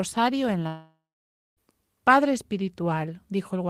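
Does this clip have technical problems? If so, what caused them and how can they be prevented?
Yes. A long network dropout likely stopped packets arriving from 0.67 to 1.60 s. The receiver stretched the last sound into a fading buzz or hiss, then about 0.58 s of silence, and the speech resumed with roughly 0.9 s lost. Preventing it means a steadier network connection, plus forward error correction or a larger jitter buffer.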